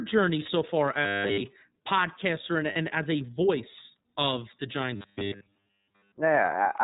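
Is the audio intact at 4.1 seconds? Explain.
No. At 4.1 s, as across the whole clip, the speech carries plainly audible iLBC codec damage. Nothing above 4 kHz survives, and each 30 ms frame is coded on its own, fitting a 13.33 kbps mode, which gives a rough, synthetic grain that a simple low-pass filter would not add.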